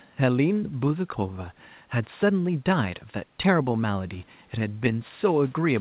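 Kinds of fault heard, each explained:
Nothing's going wrong here: the faint room noise sits about 37 dB under the speech, and the call path's usual top-end limit at 4 kHz is all you'd expect from a G.711 line.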